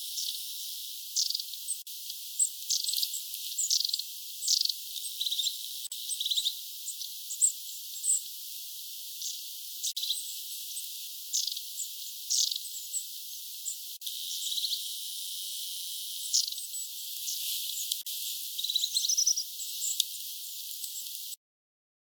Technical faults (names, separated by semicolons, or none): gap at a join of encoded pieces; cut-off end